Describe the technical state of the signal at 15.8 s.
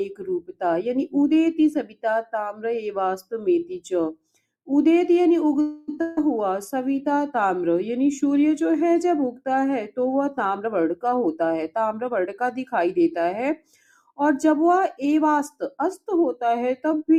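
A speech-oriented noise suppressor is running on this non-speech audio, treating sustained material and decays as noise. Its gain swings by around 10 dB, so attacks pass while held sound and tails sink, giving a pumping, thinned character.

At 15.8 s the signal is just recovering from a sound cut by the noise suppressor, spanning 15.50 to 15.78 s. The suppressor misread this sound as noise and pulled it down by as much as about 20 dB, so it dips sharply.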